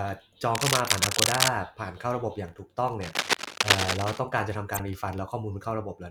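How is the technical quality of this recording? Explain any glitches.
The recording has two kinds of glitch, each heard twice.

Cable scratch noise runs from 0.55 to 1.48 s, a little louder than the speech, and from 3.01 to 4.20 s, at about the speech's level. It is likely a worn cable or connector being moved, so its contact resistance jumps around. It sounds like rustling scratches laid over the audio. A waveform shows ragged, uneven bursts, and a spectrogram shows broadband speckle.

A corrupt frame decoded appears at 0.87 to 0.89 s, which fits a single damaged frame, and at 4.74 to 4.80 s, which fits about two. The decoder played corrupted data, so energy landed at the wrong frequencies. It is heard as a short chirp or blip peaking around -25 and -20 dBFS, and a spectrogram shows brief misplaced tonal or noisy blocks.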